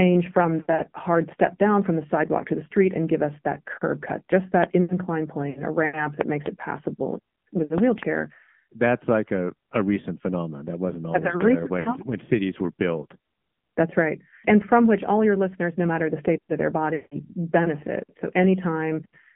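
AMR narrowband mobile codec, throughout the speech: the sound is held to a telephone band of about 150 Hz to 3.4 kHz and carries a plainly audible buzzy, synthetic edge, which fits a low AMR-NB mode around 7.4 kbps modelling speech from sparse pulses.

Lost AMR speech frames at 5.50 to 5.63 s, just before "a ramp", and at 11.80 to 11.90 s, before "cities were built": each brief warbling dip, consistent with about 60 ms of failed frames, comes from the decoder repeating the last good settings at falling gain. At 16.96 to 17.16 s, after "the state of their", a longer gap of about 160 ms is drawn out and fades towards silence before the speech returns rough.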